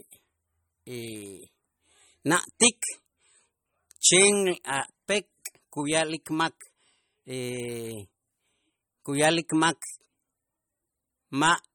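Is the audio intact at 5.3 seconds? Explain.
No. At 5.3 s the speech carries MP3 compression damage, as it does throughout. It sounds watery and swirly, with dull treble and smeared attacks. The likely cause is a bit-starved encoder, consistent with about 35 kbps. It cuts treble and drops weak frequency lines frame to frame.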